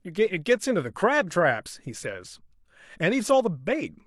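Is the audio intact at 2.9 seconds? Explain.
Yes, the audio is intact at 2.9 seconds, with no audible fault at that moment.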